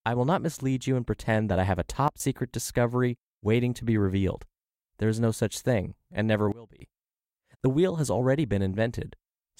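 It's a speech clip with two sudden gain jumps, where the level steps down abruptly and the background noise drops right along with the speech. The first runs 2.08 to 2.2 s, about 15 dB down, between "that I have a" and "discovery waiting to be"; the second, 6.52 to 6.8 s, is deeper at about 23 dB, just after "such thing and never". Likely a gain setting applied instantly, with no ramp.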